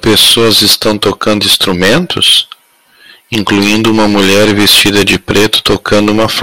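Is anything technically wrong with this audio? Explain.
Yes. Hard clipping runs throughout: driven about 20 dB past full scale, roughly a sixth of samples are sheared flat, adding high harmonics heard as harsh fuzz on every loud syllable.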